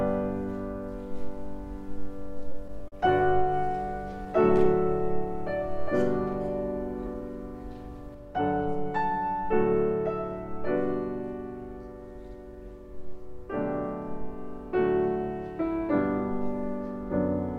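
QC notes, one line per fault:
2.39–2.94 s, repeated stalls (stutter): five short gaps, the longest 39 ms, together adding 86 ms, about 16% of this stretch. Packets arrived late, so the jitter buffer kept emptying and the receiver carried the last sound on until data resumed. Nothing is lost, but the sound hitches and drags. The waveform shows brief runs of repeated cycles, and the spectrogram shows short smeared, frozen patches instead of normal movement.
4.12–4.65 s, jitter buffer slow-down: the sound plays at 92% speed, gaining 48 ms, with pitch unchanged. The buffer was building a reserve by repeating single pitch periods or slices of pause several times in a row, which draws sounds out without lowering them. On the waveform, identical cycles repeat back to back. On the spectrogram, features are stretched in time while harmonic spacing stays the same.
8.14 s to the end, sudden gain jump: the level drops by about 4 dB in one step and stays there. 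Sound and background noise fall together, which points to a digital gain change with no ramp, likely a setting or bit shift applied mid-stream. The waveform envelope shows a sharp step down at 8.14 s. On the spectrogram, the whole band, including the noise floor, dims at the same instant.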